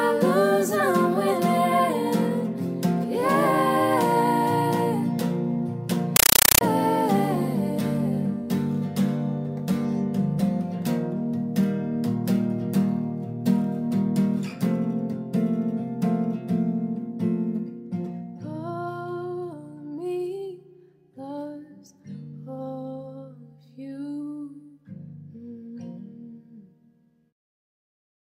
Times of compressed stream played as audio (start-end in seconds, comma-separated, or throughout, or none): 6.16-6.61